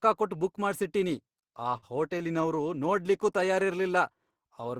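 Speech that drags and stutters from 1.32 to 2.68 s, with 14 brief hitches, the longest about 52 ms, together stretching the passage by 170 ms without losing any sound. These repeated stalls (stutter) happen when packets arrive late and the jitter buffer runs dry, so the receiver holds the last sound until data resumes. From 2.87 to 4.62 s the speech plays at about 92% speed at unchanged pitch, adding 143 ms. This is a jitter buffer slow-down, where repeated pitch periods rebuild the buffer's reserve.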